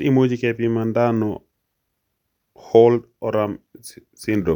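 Listening closely to the speech, nothing stood out as a technical fault at any point.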